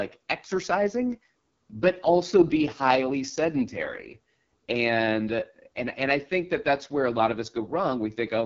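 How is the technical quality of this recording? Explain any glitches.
The technical quality is poor. The whole recording has passed through the AMR wideband (HD Voice) codec at a very low rate, and the damage is heavy. The speech sounds rough and raspy from start to finish, with the raspy buzz typical of the codec's lowest mode, which points to about 6.6 kbit/s. The codec models the voice as pulses exciting a vocal tract filter up to 6.4 kHz. At this rate that model is too coarse, so the voice turns grainy. Above 6.4 kHz it adds only synthetic shaped noise, and there is nothing above 7.3 kHz. That band of hiss and the raspy texture tell it apart from a plain low-pass filter or narrowband telephone coding.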